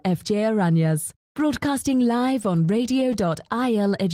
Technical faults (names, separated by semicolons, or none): repeated stalls (stutter)